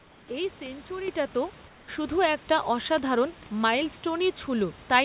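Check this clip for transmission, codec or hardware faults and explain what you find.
Two kinds of fault turn up: the background is twice swapped for synthetic noise, and the microphone level twice jumps upward in a single step.

Comfort noise in place of the background appears from 0.0 to 0.28 s and again from 1.68 to 1.88 s. The background, sitting about 30 dB and 28 dB below the loud parts, is replaced by a steady, featureless hiss roughly 3 dB quieter. This is likely the sender's discontinuous transmission cutting out during pauses, with the receiver synthesising noise. On a spectrogram those stretches look smooth and uniform, without the real room's texture.

Microphone volume stepped up at 1.08 s by 8 dB and at 2.1 s by 4 dB, the second just before "একটা অসাধারণ". The call software judged the input too quiet and raised the device gain in one jump, so sound and background get louder together. 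A waveform shows an abrupt widening of the envelope at each point, and the spectrogram brightens across every band, all of it below the 4 kHz ceiling of the narrowband call path.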